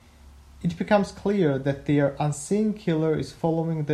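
Nothing in the recording stood out as a technical problem on listening.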